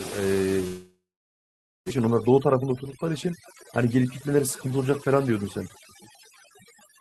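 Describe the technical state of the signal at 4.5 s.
Overdone noise removal is present at 4.5 s, as it is across the whole clip. The noise reduction is set so aggressively that frequency bands near its noise estimate are pulled almost to silence, taking quiet speech detail with them. The background drops and breaks up into twinkling specks.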